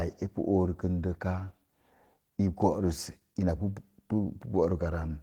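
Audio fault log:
throughout, Opus voice compression: the speech comes out hoarse and faintly robotic, with the lower band built by a linear-prediction coder on a coarsely coded excitation. The top still reaches 20.2 kHz, which fits a hybrid mode at around 16 kbps.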